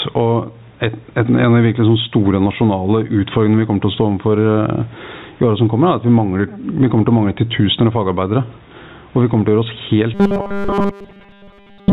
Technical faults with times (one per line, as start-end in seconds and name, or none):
0.00-11.92 gain pumping
10.14-11.92 robotic sound from repeated short buffers